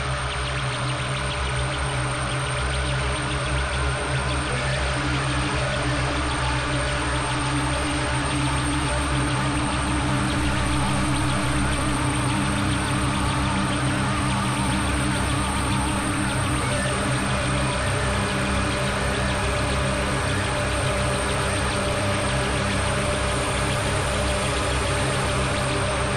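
At 10.38 s a DC step shifts the waveform's zero line by about -31 dBFS, until 11.95 s. Each edge gives a low thump or click while the sound carries on unbroken, unlike a dropout or splice click, which interrupts it.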